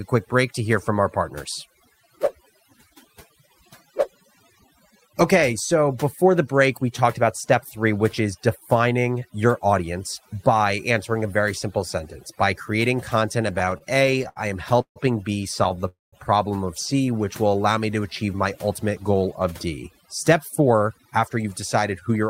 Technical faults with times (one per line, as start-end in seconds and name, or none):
0.00-22.29 overdone noise removal
13.53-14.98 repeated stalls (stutter)
15.64-15.84 repeated stalls (stutter)
15.88-16.14 call audio freeze
19.15-20.05 jitter buffer speed-up
20.60-22.24 jitter buffer speed-up